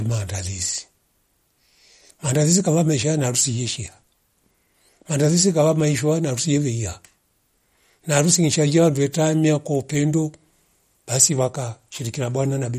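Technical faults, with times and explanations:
Throughout, MP3 compression: the speech has a plainly audible watery, swirling quality, with s sounds turning metallic and consonant attacks smeared. This is likely lossy coding starved of bits, consistent with a rate around 48 kbps, so weak frequency lines are dropped and reappear frame to frame. A spectrogram would show a hard ceiling at 15.1 kHz and speckled, flickering holes in the upper bands, while the waveform's transient edges look softened.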